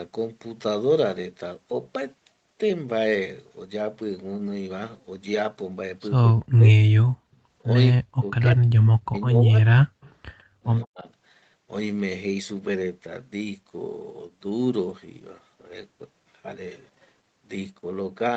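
From 6.23 to 6.59 s the speech drops by roughly 40 dB in pieces. This is speech suppressed in double talk, likely because the echo canceller, with far-end audio on the loudspeaker, took the local talker for echo and turned both down. Unlike gating, the voice itself is cut.

At 7.02 to 7.27 s the background is gated by the echo canceller. The room sound falls by about 40 dB and then returns, with no speech being clipped. That sets it apart from double-talk suppression.

From 7.93 to 9.85 s the double-talk suppression returns, affecting roughly a second of speech in total.

Inside that stretch, at 9.21 to 9.26 s, an echo leak comes through. It is a faint delayed copy of the loudspeaker voice, 152 ms late and about 25 dB below the speech, likely from a canceller that did not fully remove what the microphone picked up. Because it is a second, later voice, it cannot be mistaken for a dip. Further scraps of this echo leak appear at 10.01 to 10.13 s (about 30 dB down) and 10.82 to 10.87 s (about 35 dB down).

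At 10.45 to 10.57 s the background is gated again, by about 32 dB.

From 10.85 to 11.07 s the speech is suppressed once more, by roughly 40 dB, for about 200 ms.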